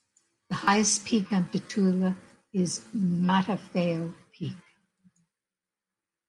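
No technical faults can be heard anywhere in the recording.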